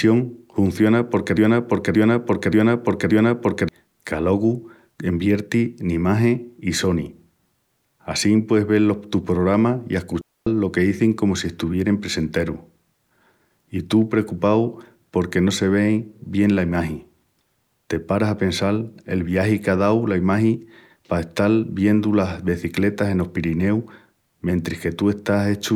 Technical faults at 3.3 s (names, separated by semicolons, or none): broken-record loop